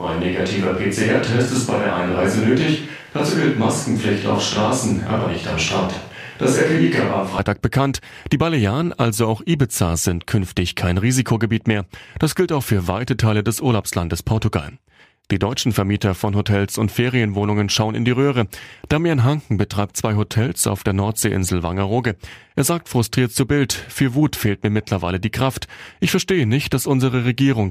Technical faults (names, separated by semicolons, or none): switch to a distant microphone